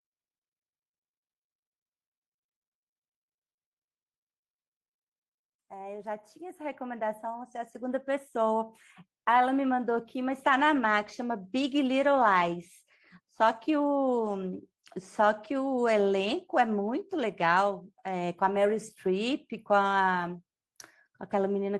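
From 5.96 to 11.5 s, speech and background swell together by about 12 dB: automatic gain rising, as the gain control judged the input too quiet and slowly lifted it.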